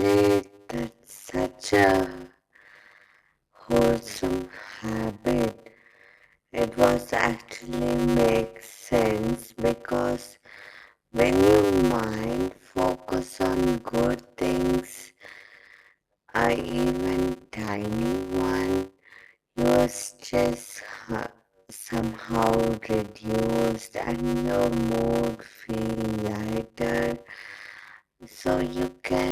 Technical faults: block size mismatch (padded)

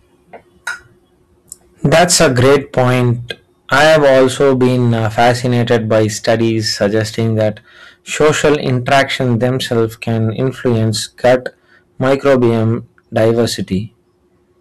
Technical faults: hard clipping

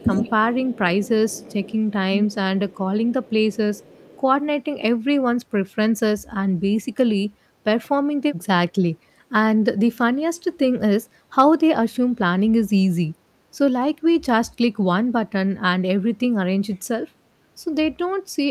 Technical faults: echo leak

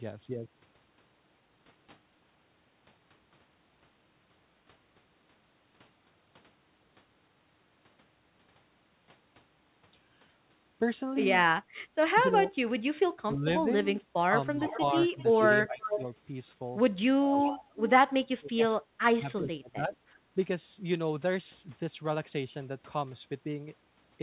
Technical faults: speech suppressed in double talk; echo leak

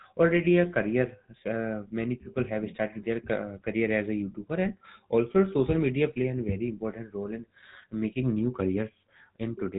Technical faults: GSM full-rate codec

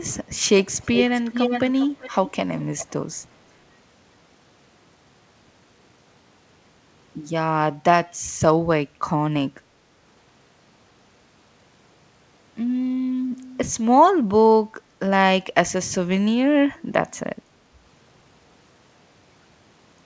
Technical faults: echo leak

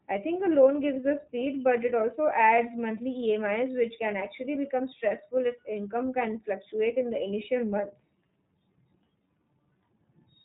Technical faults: iLBC codec

